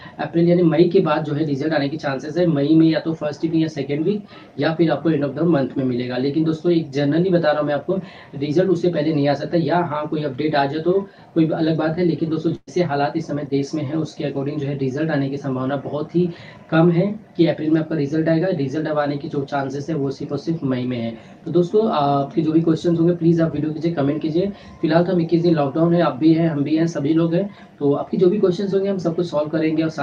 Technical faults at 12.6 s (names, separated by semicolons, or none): burst of packet loss